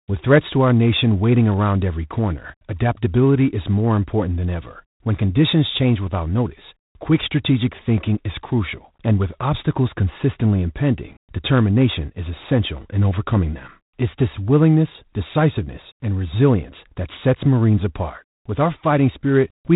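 G.726 ADPCM throughout: nothing above 3.8 kHz passes, and coarse prediction-difference coding adds a harsh, rasping hiss that tracks the speech level, which fits 24 kbit/s.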